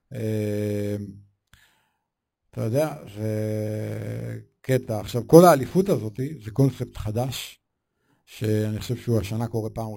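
Imaging from sample-and-hold upsampling, throughout: samples repeated unfiltered from 11 kHz to 44.1 kHz mirror the speech into 5.5–11 kHz, a metallic fizz about 22 dB down.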